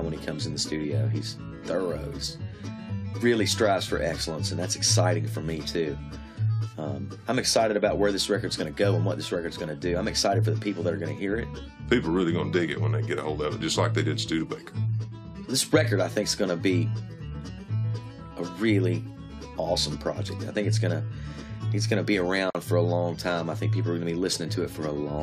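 At 22.50 s to 22.55 s there is a gap at a join of encoded pieces: a 46 ms hole in continuous sound. Separately encoded segments were spliced untrimmed, so encoder start delay and last-frame padding remain, and the sound then resumes where it stopped.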